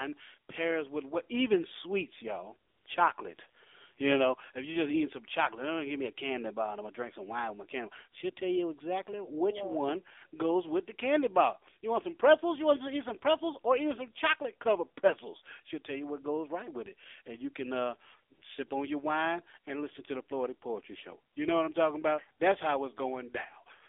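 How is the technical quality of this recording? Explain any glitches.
The recording has two clear problems: it's been through a low-rate mobile speech codec the whole way, and there are a few short patches of comfort noise.

The AMR narrowband mobile codec is audible throughout. Everything sits in a telephone band of roughly 300 Hz to 3.6 kHz, so there's no air or sibilance up top. The coder rebuilds the voice from a vocal-tract model and a handful of excitation pulses per frame. The buzzy, synthetic edge you hear points to a low rate, around 7.4 kbps.

AMR comfort noise shows up four times. The longest gap is 2.70 to 2.86 s, right after "what even sweets y'all", and lasts 160 ms. There's an 80 ms gap from 18.34 to 18.42 s after "and you can uh", and a 20 ms blip at 18.68 s just before "on your wine and". Another 20 ms blip comes at 21.34 s. In each case the sender decided nobody was talking and stopped sending speech frames. 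The receiver then filled the hole with smooth synthetic noise, so the real background drops out and a flat hiss switches in and out.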